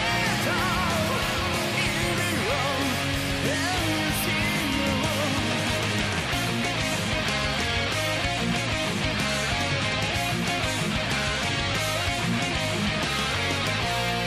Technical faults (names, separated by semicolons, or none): computer activity noise